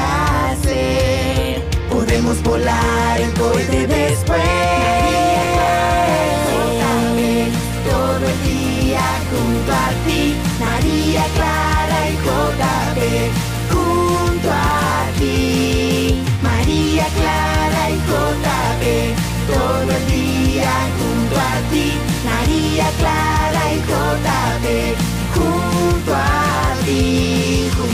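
A short burst of gritty crackle tears through the sound from 14.56 to 14.72 s, as if the signal were briefly shredded. This is processor overload crackle. The processor fell behind and missed around ten deadlines for very short buffers of roughly a millisecond and a half. Each miss dropped a sliver of silence with hard edges.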